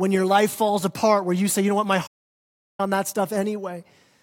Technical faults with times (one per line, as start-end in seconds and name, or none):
2.06-2.80 playback stall